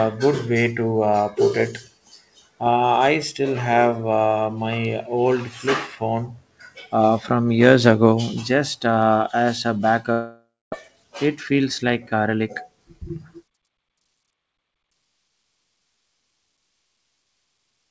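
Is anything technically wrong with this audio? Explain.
Yes, two faults. From 10.12 to 10.74 s, right after "just uh as a", the sound smears into a fading buzz, then silence, and resumes with about half a second missing. This is likely a long network dropout; unlike a brief packet loss, it leaves a gap.

From 10.88 to 12.30 s, a jitter buffer speed-up trims repeated pitch-period slices, removing about a tenth of a second. The speech runs about 7% faster at unchanged pitch, unlike resampling, which would raise it. The G.722 call path stops at 8 kHz.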